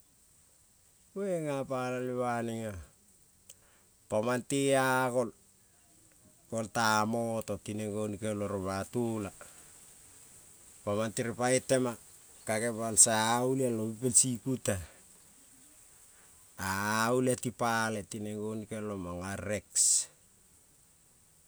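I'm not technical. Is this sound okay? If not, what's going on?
Yes, I listened to the whole recording and nothing stood out as a problem.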